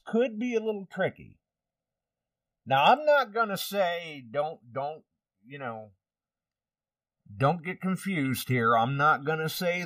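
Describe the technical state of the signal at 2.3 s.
At 2.3 s the speech carries channel delay (comb filtering), present across the whole clip rather than at that instant alone. One channel lags the other by roughly one and a half milliseconds, and when the two are summed to mono the shared content cancels at evenly spaced frequencies, the first near 300 Hz. The result is a hollow, phasey tone. Unlike a flanger's sweep, these notches stay fixed and never move.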